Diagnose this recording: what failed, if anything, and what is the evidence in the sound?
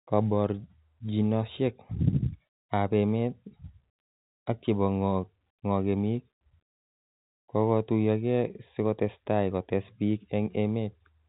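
Nothing failed; this telephone-band speech carries no audible fault.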